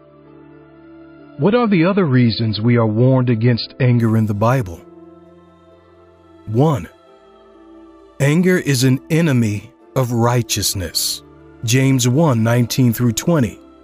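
For the first 4.0 s the audio lacks everything above 5 kHz and codec artefacts are strong. That fits an adaptive stream starting at a low bitrate, around 25 kbit/s MP3, before stepping up to about 128 kbit/s without a gap.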